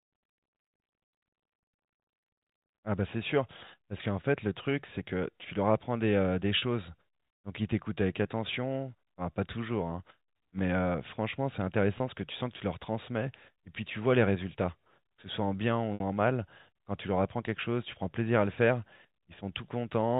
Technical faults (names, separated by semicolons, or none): packet loss with pitch repetition